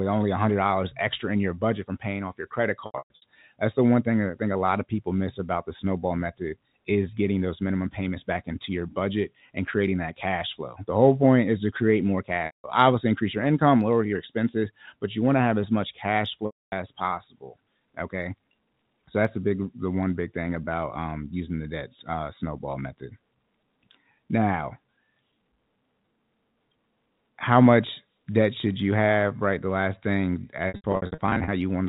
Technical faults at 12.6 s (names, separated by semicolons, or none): packet loss with pitch repetition